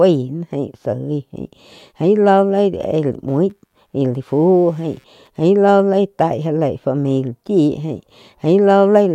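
From 3.28 to 5.28 s, computer activity noise appears. Busy hardware disturbs the shared ground, adding a faint buzzing chirp, around a hundred pulses per second, far below the speech.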